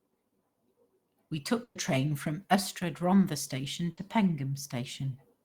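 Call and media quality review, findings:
Burst of packet loss, 1.63–1.78 s: about 120 ms of speech dropped, receiver concealment repeating the last sound as a decaying buzz/hiss, then a jump ahead. Spectrogram shows the last sound's spectrum repeated and fading out; waveform shows a shrinking tail, no silence. Probable component: network path/jitter buffer.

Burst of packet loss, 3.91–4.00 s: same signature, shorter, about 60 ms concealed and skipped, brief faded fill before speech resumes further on.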